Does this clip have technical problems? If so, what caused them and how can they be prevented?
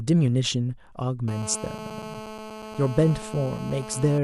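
Yes. A GSM phone buzz starts at 1.28 s and runs to 4.18 s. It is a hard, raspy buzz at about 217 Hz, sitting about 14 dB below the speech. A nearby 2G phone was on a call, sending radio bursts 217 times a second. The audio circuit rectified those pulses into sound. That is why the buzz is steady and full of harmonics. Keeping phones away from microphones and cables prevents it.

Repeated frames appear between 1.85 s and 2.09 s. A 120 ms block of speech plays two extra times, so the speech stutters there. The clip gains 240 ms because of it. The pattern suggests a short run of compressed frames, perhaps five, written or sent more than once. Reliable buffering and transport with duplicate-frame checks prevent it.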